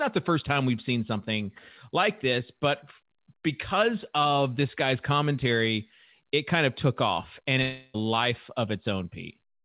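A speech clip with a long network dropout from 7.62 to 7.96 s, so about a third of a second goes missing. The receiver papers over the whole hole by stretching the last bit of sound into a buzzy, fading smear rather than dropping to silence, and then the speech picks up further along with that chunk simply gone. Likely cause is a burst of lost packets on the call. The band-limited, nothing-above-4 kHz sound is just the G.711 call path.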